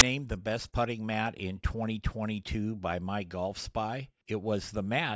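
A sharp click of very loud white noise with hard edges opens the speech at 0.0 s, lasting barely over 10 ms. It is file tags played as audio: an embedded cover picture, stored as compressed data, was read as samples, so its random-looking bytes came out as static.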